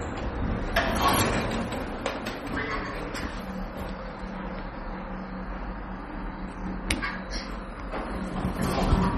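From start to finish the top end stops dead at about 12.3 kHz, and there's a watery, swirly quality with smeared attacks. That's most likely heavy MP3 compression, consistent with a low bitrate around 32 kbps, starving weak frequency lines so they flicker between frames.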